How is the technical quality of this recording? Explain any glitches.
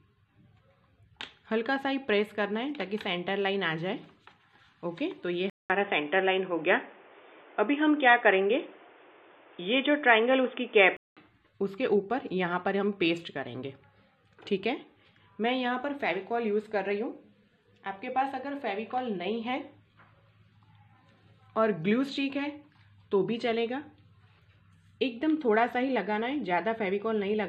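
The recording has one glitch. An input switched to a poorer device, likely, from 5.50 to 11.17 s. After a 200 ms gap, the sound turns dull, with nothing above 3.6 kHz, a level shift of roughly 5 dB, and new background noise.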